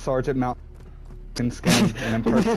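Damaged data in a compressed stream appears at 0.51 to 0.54 s, 1.37 s and 2.42 to 2.44 s as brief disruptions in the audio. Corrupted bytes make the decoder misread those frames, lose sync, and hunt for the next valid frame header.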